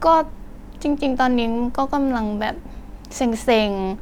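Listening through the speech, nothing stood out as a technical fault at any point.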